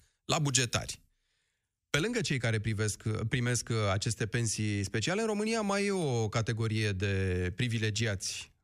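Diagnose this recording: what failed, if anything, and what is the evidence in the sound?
From 0.0 to 2.0 s the speech sounds thin, harsh and overly bright, with sibilants hissing forward, and it then settles into a normal tonal balance. This is pre-emphasis left on, at the playback or receive stage. The treble lift matches the FM 75 µs curve, about 14 dB up at 10 kHz relative to 1 kHz. The corresponding de-emphasis roll-off was never applied for those first two seconds, so the boosted highs come through uncorrected.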